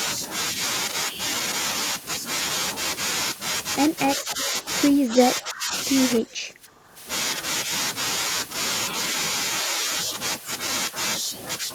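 An echo canceller likely clamped down during double talk, unable to tell the near talker from loudspeaker echo, so this speech clip shows speech suppressed in double talk three times. The level sags at 4.17 to 4.39 s and again at 6.22 to 6.96 s, each by around 10 dB, and dips deepest, around 15 dB, at 5.10 to 5.73 s, leaving those stretches audibly ducked before the speech recovers.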